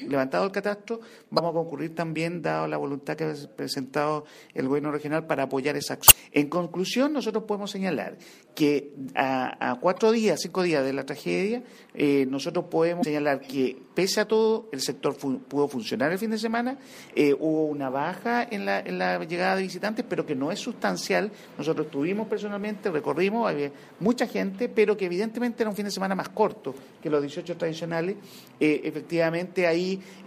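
Quick glitches at 1.35–1.39, 6.05–6.12, 9.96–9.99 and 13.00–13.04 s point to damaged data in a compressed stream: the decoder misreads corrupted frames and loses sync.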